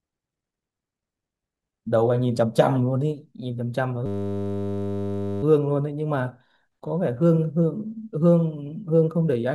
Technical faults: system hang loop

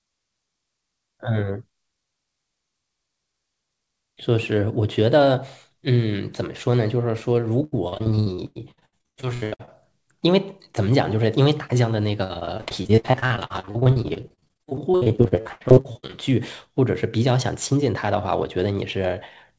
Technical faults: repeated packet loss (robotic sound)

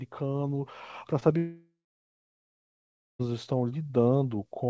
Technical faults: short concealed packet loss; long network dropout

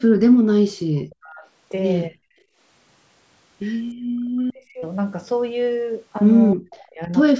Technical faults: speech suppressed in double talk; background gated by the echo canceller

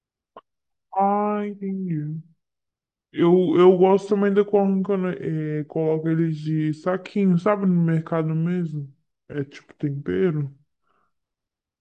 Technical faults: wrong sample rate

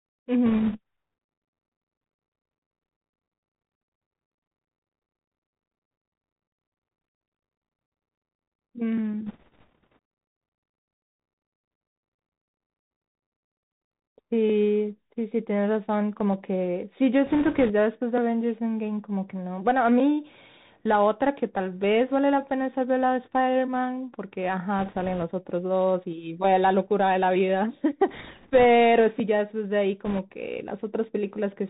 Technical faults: Bluetooth CVSD headset codec; bit errors on a Bluetooth voice link

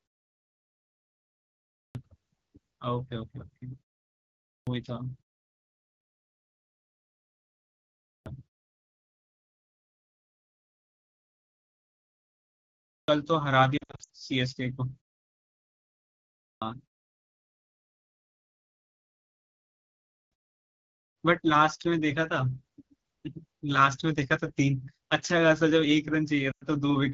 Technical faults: AMR wideband (HD Voice) codec; clipped start after a pause; lost AMR speech frames

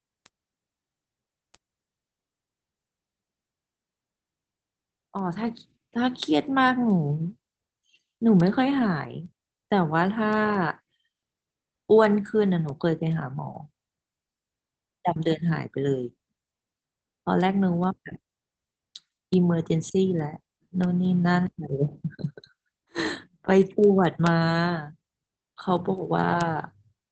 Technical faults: Opus voice compression

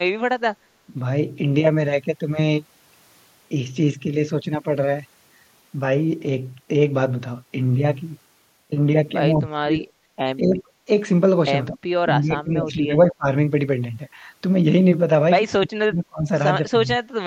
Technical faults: speech suppressed in double talk

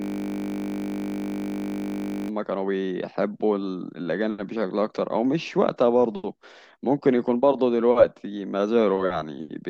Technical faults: system hang loop

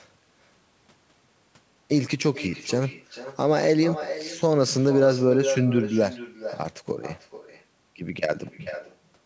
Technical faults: echo with no canceller

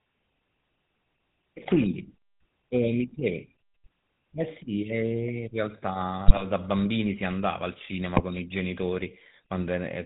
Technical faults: GSM full-rate codec; GSM bit errors

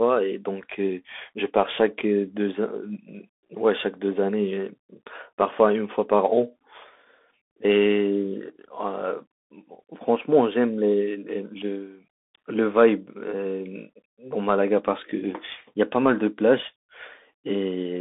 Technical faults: Bluetooth CVSD headset codec

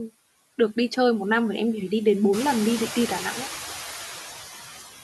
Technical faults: noise suppressor artifacts

